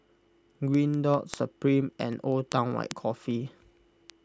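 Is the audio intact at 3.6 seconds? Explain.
No. At 3.6 seconds the speech sits inside a run of word clock ticks spanning 0.15 to 4.10 s. The receiving device's clock drifts against the sender's by roughly 300 ppm. Each slip drops or repeats one sample, producing sharp ticks about every 0.2 s, around twenty in all.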